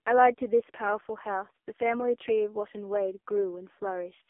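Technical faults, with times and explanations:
Throughout, AMR narrowband mobile codec. Nothing above 3.6 kHz passes. The heavily buzzy, synthetic voice fits a low 5.15 kbps mode.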